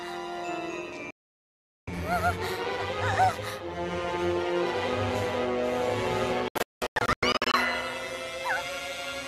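Overlap-add ripple runs throughout: frames were rejoined with an overlap that doesn't sum to constant gain, so the level pulses by about 6 dB at around 150 Hz, a metallic buzz with extra tones around each note. A digital broadcast dropout at 1.11 to 1.88 s mutes the sound for about 0.77 s after the receiver lost valid frames. A second one, from 6.48 to 7.54 s, breaks into several short holes totalling 648 ms, the longest 192 ms.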